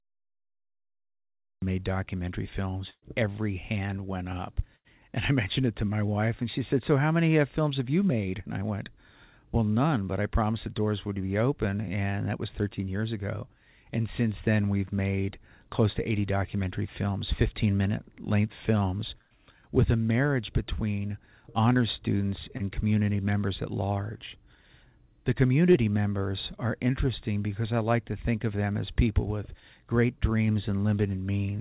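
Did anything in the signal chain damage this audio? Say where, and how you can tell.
Yes. Cut-off start at the capture or storage stage: digital silence until 1.62 s, then the audio begins abruptly mid-sound, with no attack, because recording began late.

Burst of packet loss on the network: at 2.90 s (about 120 ms, ending in brief silence), 4.76 s and 19.22 s (about 90 ms each), speech is held and fades, then resumes further on.

Short concealed packet loss, also on the network: about 30 ms at 22.57 s and 25.72 s, heard as a brief smear where the receiver patched over the gap. The call path's 4 kHz top fits G.711 A-law.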